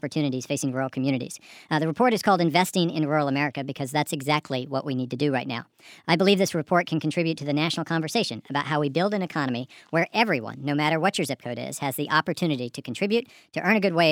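From start to finish the audio runs fast and high: everything plays about 1.38 times too quickly and sits roughly 5.5 semitones sharp. That is a wrong sample rate, with the samples replayed faster than they were captured and no conversion, which fits 32 kHz material played at 44.1 kHz. What separates it from a pitch shift or a time-stretch is that speed and pitch move together by the same ratio, with no artefacts in the texture.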